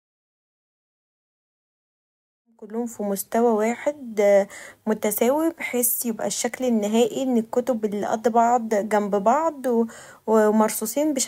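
No technical faults can be heard in this speech recording. A smooth fade-in brings the level up gradually from around 2.5 s to full level at 3.23 s, with no click or hard edge.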